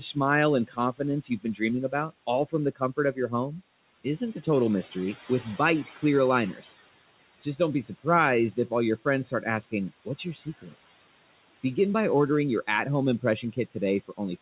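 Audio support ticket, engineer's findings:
Speech cut by the noise suppressor, three spans. 0.00–4.95 s: soft consonants and word endings swallowed, about 700 ms in total, dips up to about 17 dB. 7.43–10.75 s: same symptom, about 400 ms, up to about 12 dB. 13.22 s to end, after "ordering your at home": up to about 13 dB. Probable component: suppressor gain stage misclassifying low-level speech as noise, pulling it down with the room background (about 21 dB under speech).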